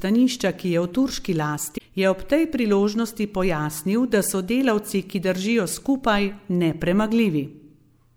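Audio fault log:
1.77–1.79 s, damaged data in a compressed stream: about 28 ms of the speech turns into a short glitch. Some bytes in the compressed stream got corrupted there, so the decoder misreads those frames, loses sync, and only recovers once it locks onto the next clean frame header.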